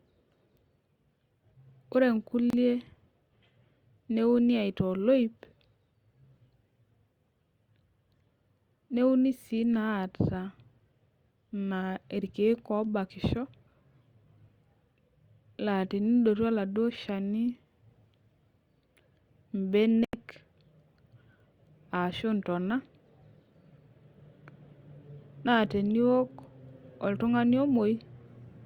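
Packets on what is likely a Bluetooth link reached the headphones too late and were discarded, causing Bluetooth dropouts. At 2.50 to 2.53 s the speech cuts to silence for about 29 ms, a gap that fits two lost packets. At 20.05 to 20.14 s a longer hole of about 87 ms opens, consistent with six packets. Each gap begins and ends sharply, either abruptly or with a fade of a few milliseconds, and the speech returns further along, as though it kept playing unheard.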